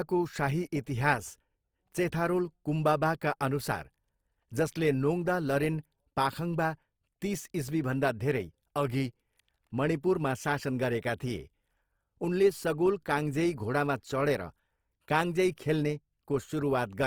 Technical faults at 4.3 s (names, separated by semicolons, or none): Opus compression